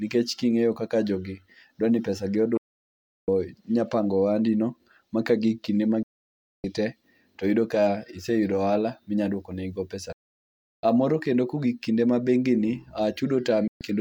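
The receiver loses the digital signal, or frames fail their checksum, and it mutes until good frames return. This digital broadcast dropout cuts the speech four times, each with a fade of about 3 ms: from 2.57 to 3.28 s, 6.03 to 6.64 s, 10.12 to 10.84 s, and 13.68 to 13.81 s. The gaps of 704, 608, 704 and 128 ms fit whole 32 ms frames going missing. The speech stops, then resumes further on, and whatever was sent meanwhile is gone.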